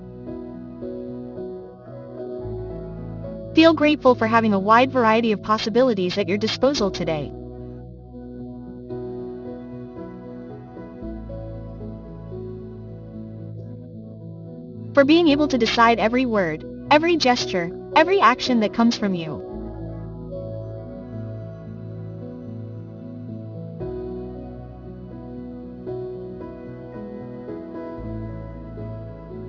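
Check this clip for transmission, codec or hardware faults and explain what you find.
One fault runs through the whole clip: aliasing. High content sounds gritty and metallic, folded back below 6 kHz, about 20 dB down, which fits resampling to 12 kHz without an anti-alias filter.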